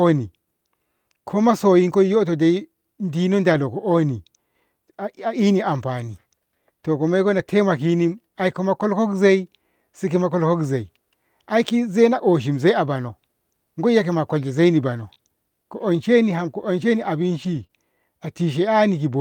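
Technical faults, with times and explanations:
3.49 to 3.63 s and 7.37 to 7.39 s, lost packets rebuilt from error correction: right after "masoyinkoi yoto dai diino", and again after "to komoiko", the audio turns briefly rough and grainy. The decoder played low-bitrate backup copies, which fits about four lost packets at the first point and one at the second. On a spectrogram these stretches show blurrier, noisier harmonics. The waveform has no gap.
14.97 to 17.71 s, scattered short gaps: after "koiya kolshe zaini", about three tiny holes, none longer than roughly 20 ms, were patched by extending the preceding sound. They come through as ticks or hiccups. On a spectrogram each appears as a thin vertical seam where the harmonics briefly freeze or smear.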